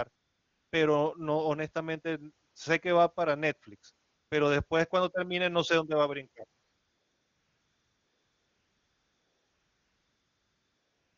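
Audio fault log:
0.15–0.71 s, 2.51–2.55 s (between "pero no honestamente" and "sé que va para"), 4.05–4.31 s (just before "pero después cuando termine"), 6.63–11.18 s (after "dónde va a brincar"): AMR comfort noise. The handset judged the talker silent and stopped sending speech frames for gaps of 560 ms, 40 ms, 260 ms and about 4.55 s, and the receiver filled each with synthetic noise built from a rough level and spectral outline. The real background gives way to a smooth, steady hiss that switches in and out. On a spectrogram these stretches are flat, evenly textured bands with abrupt edges, and on the waveform they are uniform low-level noise with no natural fluctuation. The underlying AMR-WB link at 23.85 kbit/s shows little or no coding damage of its own.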